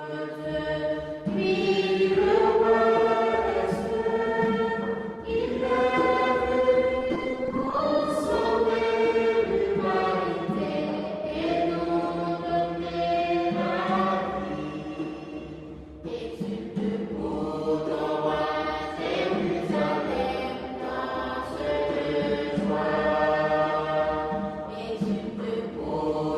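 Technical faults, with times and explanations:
6.99 to 7.99 s, repeated packet loss (robotic sound): over twenty short holes opened in the stream, each at most 10 ms, which fits 10 ms packets. Each was patched by extending the preceding sound, so nearly a quarter of that second is fill, giving a choppy, robotic texture.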